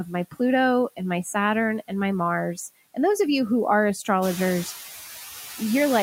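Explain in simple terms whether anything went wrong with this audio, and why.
Noise suppressor artifacts run through the whole clip. The background drops between phrases and creeps back under the speech, which plain room noise would not do. That room noise does get louder around 4 seconds.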